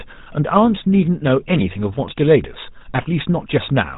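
From start to finish the speech carries GSM full-rate codec damage: a gravelly, buzzy roughness from pulse-driven vocal-tract modelling, with nothing above 3.8 kHz. The grit in voiced sounds, not mere dullness, separates it from plain band-limiting, and fits a 13 kbps coder.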